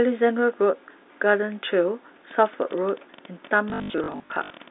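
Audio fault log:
2.31 to 4.69 s, train of clicks: roughly thirty sharp ticks, around 12 a second and unevenly spaced, popping up about as loud as the speech itself. They sound alike each time, so the likely cause is interference from nearby gear or a faulty connection.
3.7 to 4.5 s, packet loss with last packet repeated: about 440 ms went missing in bits across this stretch, the longest gap 80 ms, which fits 20 ms packets. The runs buzz at roughly 50 Hz, a robotic stutter under the narrow 250 Hz to 3.7 kHz telephone band.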